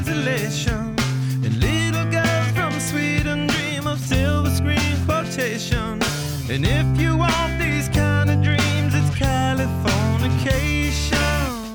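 No dropouts, distortion, glitches or other transmission or processing faults can be heard anywhere in the clip.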